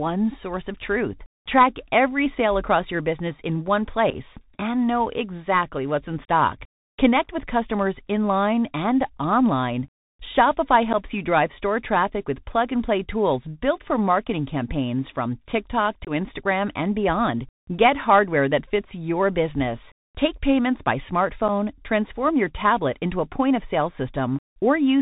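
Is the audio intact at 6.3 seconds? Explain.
No. Right after "know exactly what's in", from about 6.25 to 6.29 s, the speech drops out through unconcealed Bluetooth headset packet loss. Roughly ten short voice packets between headset and phone never arrived, and nothing filled the gaps, so about 34 ms of audio is missing within a 37.5 ms stretch, with one continuous hole of 30 ms. The edges are abrupt, and the speech returns briefly quieter as the link recovers.

That moment also carries the Bluetooth CVSD headset codec damage present across the whole clip, which is consistent with a 64 kbps CVSD link. Each sample is coded as a single up-or-down step whose size adapts, and content above 4 kHz is cut off. Loud high-frequency sounds outrun the step size and distort, s sounds come out scratchy, and a granular hiss sits under the speech. The damage is plainly audible.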